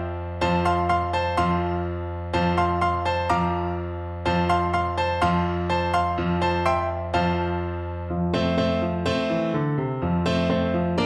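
No technical faults can be heard anywhere in the recording.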